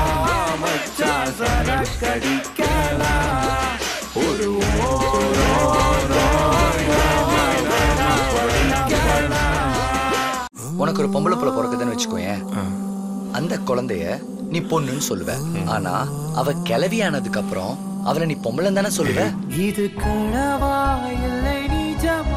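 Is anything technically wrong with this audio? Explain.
Yes, there are a few problems.

The whole clip is dull and has a grainy, gurgling texture, with the top end coming and going. That's likely MP2 compression at a low rate, around 80 kbps. Too few bits means upper sub-bands get switched off and the remaining ones are coarsely quantised.

There's DAB burbling at 2.92 to 3.00 s and again at 18.96 to 19.18 s. Both are short bursts of noise blips in single bands. Bit errors got past error correction into the MP2 data and corrupted samples. The first is a light, quick blip. The second is longer and messier, pointing to a higher error rate.

From 5.14 to 9.22 s there's a doubled audio track. A full-band copy about as loud as the original trails it by roughly 0.7 s, with no room colour. It cuts in and out abruptly at both ends, which fits a second, slower capture path or a botched edit.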